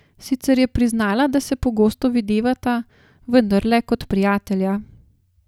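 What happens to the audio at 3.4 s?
Nothing goes wrong at 3.4 s; the speech carries on intact through that moment, with no dropout, click, distortion or other fault to be heard there.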